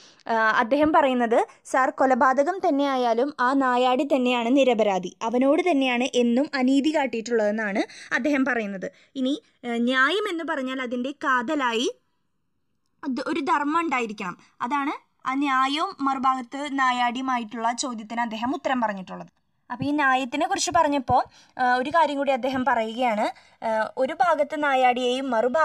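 From the start to the end of the clip the two channels drift apart. Each side seems to have been captured on its own clock, and the two clocks disagree by something like 50 parts per million, so the timing offset between left and right keeps growing, ending at roughly a millisecond and a half. Folded to mono, this creates a comb of cancellations whose notches travel slowly across the spectrum, heard as a gradual, steady flanging sweep over the sound.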